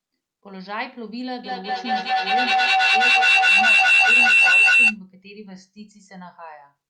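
Feedback howl runs from 1.44 to 5.02 s: two devices on the same call in one room form a microphone-to-loudspeaker loop that gains on each pass, narrowing to a shrill tone near 3 kHz. It pulses about five times a second and peaks about 16 dB above the speech.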